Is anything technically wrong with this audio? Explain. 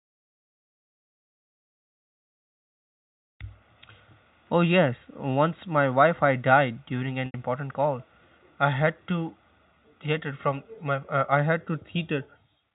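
Yes. Packet loss with pitch repetition occurs from 7.26 to 7.34 s, between "died during" and "important call I had": about 80 ms went missing, which fits roughly four 20 ms packets. The receiver filled the gap by repeating the last pitch period and fading it out, so the speech briefly sounds held and buzzy before resuming. The G.711 telephone band limit sits under this throughout.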